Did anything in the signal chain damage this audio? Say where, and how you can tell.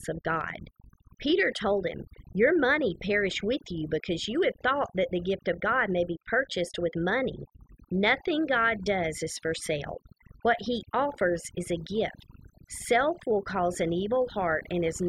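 Yes. The call processing stage damaged it: overdone noise removal runs for the whole clip. A noise suppressor with its reduction set far too aggressively is cutting individual frequency bands to near zero whenever they sit close to its noise estimate. Between phrases the background collapses into near silence scattered with twinkling specks, and the quieter components of the speech are removed along with the noise.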